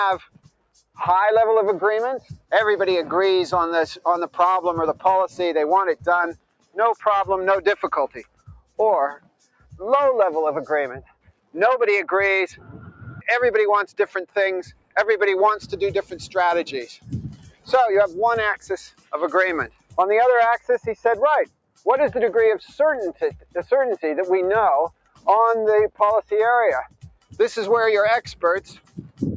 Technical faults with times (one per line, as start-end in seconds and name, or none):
0.00-29.36 noise suppressor applied to music or sounds
0.20-0.98 sound cut by the noise suppressor
2.20-2.51 sound cut by the noise suppressor
4.94-6.77 sound cut by the noise suppressor
7.83-9.76 sound cut by the noise suppressor
11.02-11.55 sound cut by the noise suppressor
12.52-23.55 sound cut by the noise suppressor
24.89-27.37 sound cut by the noise suppressor
28.35-29.20 sound cut by the noise suppressor